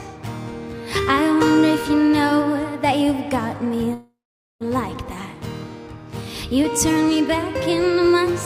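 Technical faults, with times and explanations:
3.93–4.63 s, call audio freeze: the last sound drags on as a fading buzz, drops to 470 ms of silence, then resumes exactly where it stopped. Nothing's lost, so everything after runs 672 ms late. Likely packets stalled and the jitter buffer ran dry.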